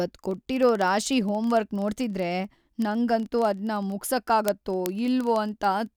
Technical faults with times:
0.13-5.96 word clock ticks

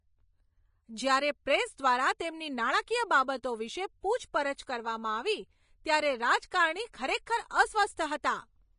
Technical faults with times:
0.00-8.78 Vorbis compression

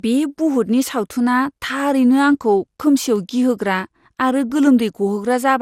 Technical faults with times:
0.00-5.62 generation loss

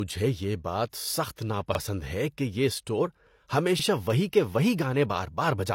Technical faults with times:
0.00-5.75 low-bitrate audio saved at a high bitrate
1.75-1.79 overlapping chunks
3.79-3.84 overlapping chunks

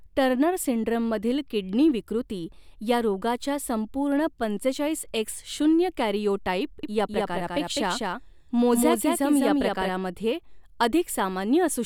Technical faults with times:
6.83-9.89 doubled audio track

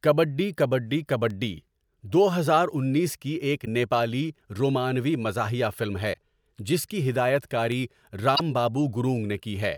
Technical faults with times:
3.62-3.68 damaged data in a compressed stream
6.10-6.15 damaged data in a compressed stream
8.32-8.40 damaged data in a compressed stream

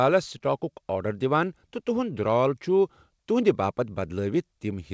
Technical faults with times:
0.00-4.93 clock drift between sender and receiver
0.38-0.42 short stall from a late packet
0.72-4.93 repeated timing corrections

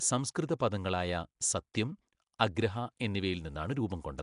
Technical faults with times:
0.00-4.22 Nellymoser compression
1.74 pre-echo

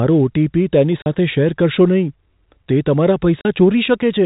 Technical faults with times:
1.02-1.06 packet loss filled with silence
3.41-3.45 packet loss filled with silence

